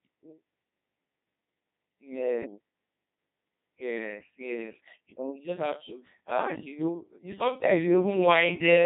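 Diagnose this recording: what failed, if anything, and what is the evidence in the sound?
The failure is at the codec stage: the speech has passed through the Codec 2 vocoder for its whole length. It sounds robotic and buzzy, with heavy damage, and the sparse texture fits the 2.4 kbit/s mode. The decoder rebuilt the speech from sine waves using only pitch, voicing, energy and a spectral envelope, so the original waveform is gone. A spectrogram shows clean, regular harmonic combs, smeared envelopes and nothing above 3.8 kHz, and the waveform looks too periodic.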